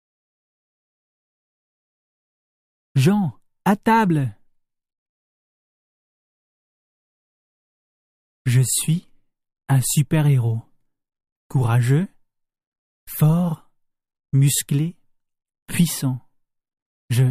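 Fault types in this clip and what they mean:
Nothing wrong turns up here; the audio comes across without any technical faults to point out.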